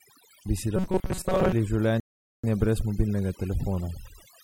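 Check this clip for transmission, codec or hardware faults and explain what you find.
Three faults show up here: one runs the whole way through, and two are short events.

Overdone noise removal is present throughout the clip. Heavy suppression pulls individual frequency bands down whenever they sit near the noise estimate, leaving twinkly near-silence between phrases.

From 0.77 to 1.53 s there's robotic sound from repeated short buffers: a rigid metallic buzz at 188 Hz. That likely comes from a stalled feed replaying a roughly 5.3 ms chunk over most of that stretch.

A rebuffering stall runs from 2.00 to 2.44 s. Playback ran dry, went silent, then picked up exactly where it stopped at "brez mobilnega", adding about 0.44 s without losing anything.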